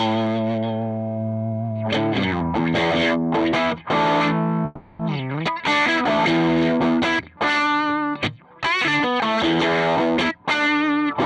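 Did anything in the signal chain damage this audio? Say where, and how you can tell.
Yes. From 4.65 to 5.01 s there is a call audio freeze, likely from packets held up on the network until the receiver's jitter buffer ran dry. The last sound is stretched into a fading buzz or hiss for about 340 ms, and the audio then resumes exactly where it left off, so nothing is lost but everything after it sits later. A spectrogram shows smeared, decaying bands across that stretch, and the waveform shows a sustained, shrinking tail instead of new onsets.

From 10.23 to 11.05 s the jitter buffer speed-up is audible. The receiver's buffer, holding more audio than its target, trimmed repeated pitch-period-sized slices to catch up, so this passage plays at about 118% of normal speed while the pitch stays put, and it sounds hurried. Roughly 150 ms is removed in total. On a spectrogram the harmonics keep their frequencies but events crowd closer together, and the waveform shows many tiny splice points where cycles were cut out.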